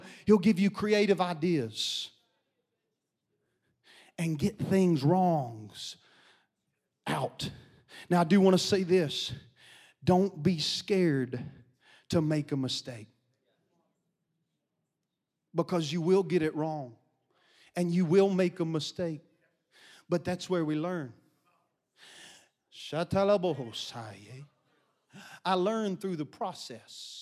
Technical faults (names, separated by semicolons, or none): none